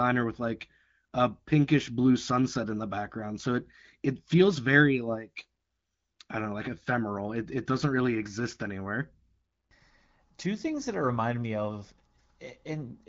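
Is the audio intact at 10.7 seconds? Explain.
Yes, the speech at 10.7 seconds is intact, carried cleanly by AMR wideband (HD Voice) coding at 12.65 kbit/s with no fault at that moment.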